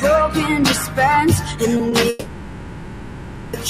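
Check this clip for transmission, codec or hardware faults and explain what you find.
Several transmission and processing faults are audible, from a speech-tuned noise suppressor and from late-arriving packets.

Noise suppressor applied to music or sounds, throughout: the suppressor treats steady tones, ambience and decaying tails as noise and pulls them down, so level swings by about 10 dB. Onsets survive while held parts sink, giving a pumping, thinned character. A waveform shows an envelope that rises on attacks and collapses between them.

Sound cut by the noise suppressor, 0.8 to 0.98 s and 1.4 to 1.62 s: in these two stretches the suppressor judged the sound to be noise and cut it by about 7 dB and about 6 dB. Sustained energy dips and tails end early. A spectrogram shows the held partials fading abruptly rather than decaying.

Short stall from a late packet, 1.77 to 1.81 s and 1.89 to 1.93 s: each time a packet arrived late, the jitter buffer emptied and the receiver stretched the preceding sound by 20 ms before resuming where it left off. 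Nothing is lost, but a moment hangs slightly with a faint buzz or dip. A spectrogram shows a brief frozen, smeared slice.

Call audio freeze, 2.09 to 3.55 s: the sound stops progressing and turns into a buzzy or hissy continuation that fades toward a low steady noise for 1.44 s, then resumes from the same point with nothing missing. The likely cause is packets held up in transit, draining the jitter buffer. A spectrogram shows a long, flat, smeared band without new onsets, and the waveform shows a decaying, featureless stretch that never drops to true silence.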